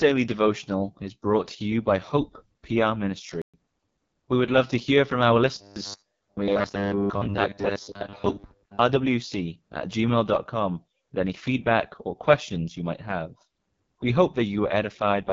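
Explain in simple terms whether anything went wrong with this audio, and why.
Yes, a few things went wrong. The whole clip went through the AMR wideband (HD Voice) codec at one of its lowest settings, so the speech sounds rough and raspy throughout. This phone-call compression also cuts off everything above about 7 kHz.

At 3.42 s there's a playback stall: the sound simply stops for about 120 ms, from 3.42 to 3.54 s, then carries on. The likely cause is the player briefly running out of audio data and waiting until more arrived.

From 5.58 to 8.79 s the speech turns into a robotic, metallic buzz at about 100 Hz. This is robotic sound from repeated short buffers. The software was likely replaying the same tiny 10 ms chunk over and over while fresh audio arrived too slowly, so most of the real speech in that stretch was skipped.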